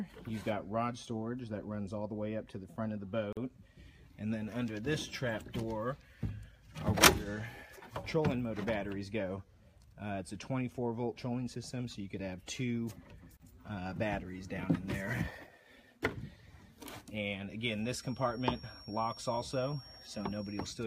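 At 3.33 s and 13.37 s, ten seconds apart, there's a gap at a join of encoded pieces: brief 43 and 31 ms dropouts where untrimmed encoder padding got left in.

From 17.75 s to the end, a thin, steady 5.6 kHz whistle sits well under the sound, swelling and fading slowly. It's likely a feedback whistle, with a speaker-to-mic loop hovering at the edge.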